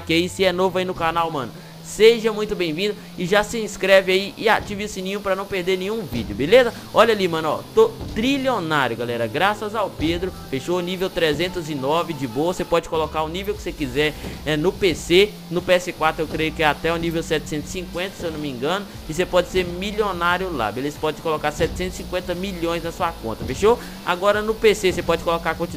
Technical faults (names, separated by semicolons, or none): sample clock jitter